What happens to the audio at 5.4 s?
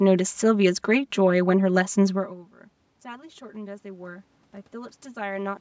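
At 5.4 s the automatic gain is rising. From 3.02 s to 5.56 s the gain control, reacting to an input that dropped by about 23 dB, pushes its gain up by about 7 dB, so speech and background swell together across those seconds.

The channel delay (comb filtering) that runs through the whole clip is also present here. One channel lags by around 5 ms, and summing to mono cancels evenly spaced frequencies starting near 100 Hz. This gives the speech a hollow, phasey colour.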